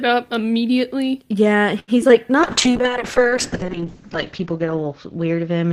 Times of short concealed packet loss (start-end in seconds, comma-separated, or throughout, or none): 2.02-2.11